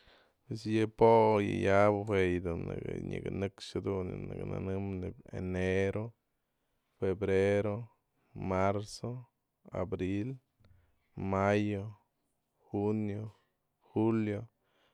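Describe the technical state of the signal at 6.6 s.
At 6.6 s the audio is intact, with no audible fault in the signal at that moment.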